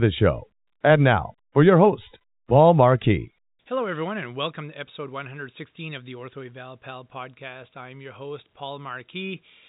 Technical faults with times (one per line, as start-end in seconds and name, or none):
none